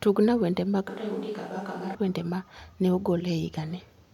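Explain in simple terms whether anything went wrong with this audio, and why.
From 0.89 to 1.95 s the speech suddenly turns hollow, roomy and quieter, then snaps back: likely a switch to a distant microphone.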